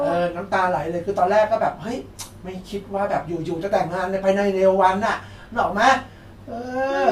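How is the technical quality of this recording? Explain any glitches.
The technical quality of this recording is sound, with no glitches to explain.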